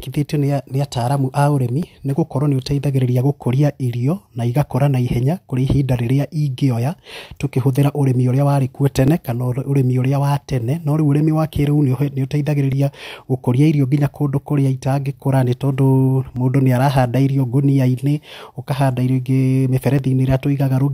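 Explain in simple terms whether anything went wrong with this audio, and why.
A click repeats about every 3.63 s in the speech, from 1.83 s to 19.99 s. These are clock drift buffer slips, likely from two devices' clocks running slightly apart.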